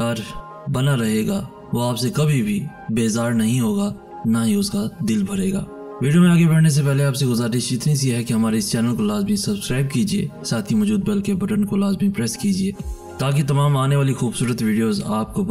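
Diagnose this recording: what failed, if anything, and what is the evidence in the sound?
Channel delay (comb filtering) runs throughout. The sound is hollow and phasey from start to end. One channel lags roughly 5 ms before both are summed to mono. Notches start near 100 Hz and repeat evenly. The fixed offset points to the driver or buffer stage.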